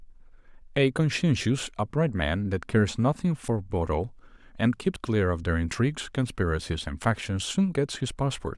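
At 3.48, 4.96 and 6.04 s the speech jumps ahead, most likely a dropped buffer (overrun), where the capture side wasn't read in time and samples got overwritten. Roughly 40 ms goes missing at the first and third, closer to 70 ms at the second, with no gap.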